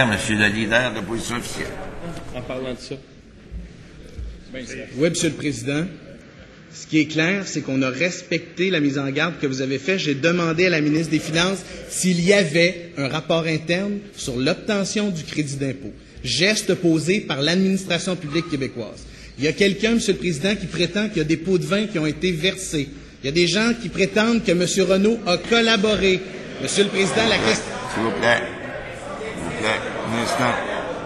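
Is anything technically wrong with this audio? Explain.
Yes. From 6.21 to 10.97 s the recording has likely switched its input to a poorer device, such as a second microphone or a headset's call profile, before switching back. That device passes a narrower band, with nothing above 7.6 kHz, so the sound turns dull and boxy, with a faint new background noise well beneath it. There is no gap at either switch and no obvious level jump, just an abrupt change in tone at each boundary.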